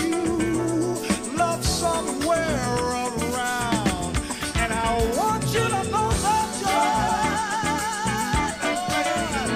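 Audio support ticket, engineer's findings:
No faults found on listening.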